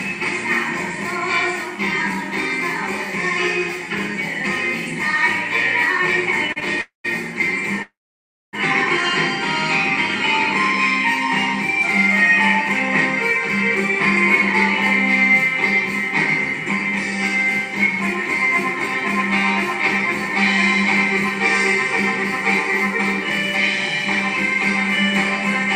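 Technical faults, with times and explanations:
6.52–6.58 s, short stall from a late packet: the sound holds for about 36 ms with a faint buzzy smear, then resumes exactly where it stopped. A packet arrived late, the jitter buffer emptied, and the receiver stretched the last fragment until it came, so nothing is lost.
6.81–7.06 s and 7.82–8.55 s, call audio freeze: the audio turns into a fading buzz and then silence, about 140 ms in the first and 610 ms in the second, before continuing where it stopped. This likely comes from packets held up in transit draining the jitter buffer.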